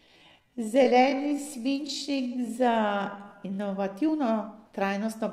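Speech, and the first stretch from 0.0 to 3.72 s is a time-stretched section: it plays at about 0.6 times normal pace while the pitch stays where it should, so it drags, then snaps back to normal speed at 3.72 s. That's most likely software lengthening the audio to fill a slot, keeping pitch by repeating short slices.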